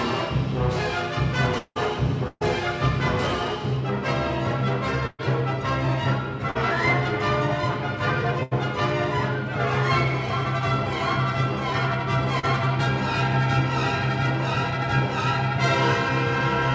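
From 1.58 to 1.78 s, a long network dropout is the likely cause: about 180 ms of audio never arrived, so the receiver stretched the last sound into a fading buzz or hiss, which ends in roughly 60 ms of silence before the audio resumes further on with that stretch gone. Throughout the clip, nothing is heard above 8 kHz, which fits a G.722 wideband call codec.

Bursts of packet loss follow at 2.28 to 2.43 s, 5.07 to 5.21 s and 8.43 to 8.53 s. Consecutive packets were lost or came too late to be played, dropping about 140 ms, 120 ms and 80 ms of audio. Each time, the receiver extended the preceding sound and turned it down, giving a held buzz or fading hiss. The first gap ends in about 40 ms of silence and the second in about 20 ms, and then the audio jumps ahead past the missing part.

Short concealed packet loss occurs at 6.51 to 6.57 s and 12.39 to 12.45 s. Roughly 40 ms failed to reach the decoder in time, and the receiver patched each hole by continuing the previous sound, pitched or noise-like, then blended back into the real signal. 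This is heard as a brief smear or wobble, and a very short sound can drop out entirely.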